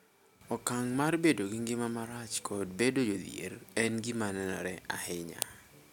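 Nothing in the speech recording stood out as a technical problem on listening.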